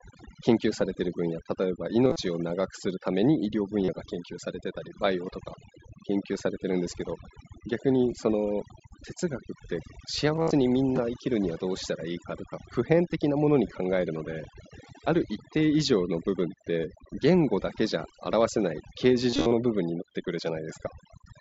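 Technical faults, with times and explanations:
throughout: overdone noise removal. The background sits near silent with twinkling specks, and quiet parts of the voice are pulled down along with the noise. Unlike the light grain of the mSBC headset codec, which rides on loud sounds, this runs through the whole clip.
2.05–2.16 s, 3.85–3.88 s, 10.36–10.51 s, 19.30–19.51 s: concealed Bluetooth headset packet loss. Missing stretches are filled by repeating recent waveform, giving a buzzy tone held at full level, with a warble where real audio returns. The losses run up to 52.5 ms, longest around 10.4 s, rather than being silent gaps or clicks.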